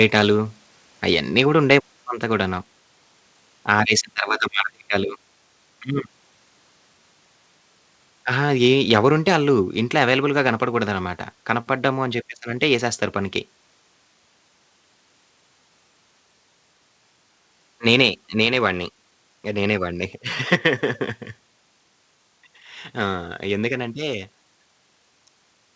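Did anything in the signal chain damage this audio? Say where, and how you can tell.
Yes. From 0.0 to 0.21 s and 8.91 to 8.99 s, peaks turn harsh and crackly: microphone overload at the converter, likely driven about 2 to 3 dB over full scale, flattening roughly one percent of samples.

At 1.14, 2.16 and 9.75 s the sound drops abruptly by about 1 to 2 dB: likely the microphone volume stepped down.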